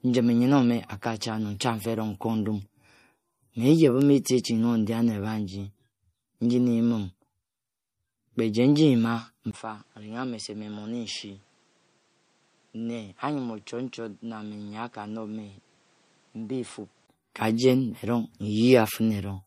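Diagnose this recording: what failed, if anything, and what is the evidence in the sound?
Codec stage. Throughout the speech, nothing is heard above 15.3 kHz. The top band stops abruptly, with a smeared, swirly texture. This is likely low-bitrate audio saved at a high bitrate. The sound fits a 48 kbit/s MP3 re-encoded at 320 kbit/s, which cannot restore what was lost.

Input stage. At 9.51 s the sound drops out for 20 ms. It returns duller, about 10 dB quieter, and cut off above 9.7 kHz, with new noise roughly 35 dB down. The full band returns at 17.08 s. The input was likely switched to a poorer device.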